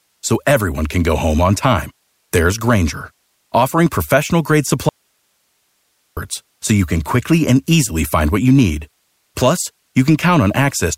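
A speech clip with an audio dropout to a faint residue from 4.89 to 6.17 s. The speech cuts out abruptly for 1.28 s, leaving only hiss around 50 dB below the signal. Likely the source dropped while the downstream path stayed live.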